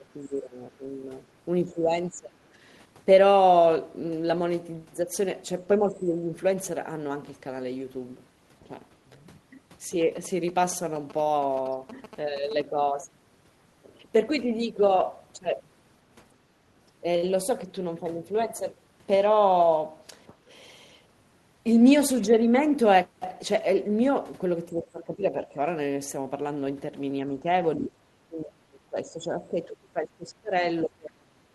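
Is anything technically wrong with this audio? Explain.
Yes, there are three kinds of fault.

Speech suppressed in double talk occurs at 0.0–0.86 s, 1.65–2.46 s, 5.8–6.3 s, 24.68–25.57 s, 27.27–30.52 s, and from 30.83 s to the end. In each stretch the speech dips in level. The dips are about 10 to 20 dB early on and deepen to about 25 dB and then about 35 dB in the last two. The likely cause is an echo canceller that could not tell the near talker from loudspeaker echo while both sides spoke, so it attenuated everything.

GSM signalling bursts run from 10.01 to 12.62 s. They sound like a galloping pattern of short buzzes at 217 Hz, roughly 15 dB below the speech. A nearby 2G phone sending grouped radio bursts while signalling induces this interference. The audio circuitry rectifies the RF envelope, turning the burst rhythm into an audible buzz.

Background gated by the echo canceller occurs at 20.29–20.5 s. 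The room sound drops by about 13 dB for roughly a fifth of a second, then comes back. The canceller clamped the microphone hard while the far end's loudspeaker was playing and then let go, so the ambience briefly vanishes. The Opus call path itself caps the top end near 12 kHz.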